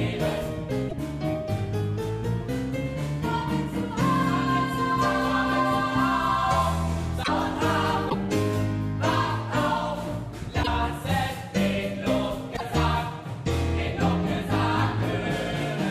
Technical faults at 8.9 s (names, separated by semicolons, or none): none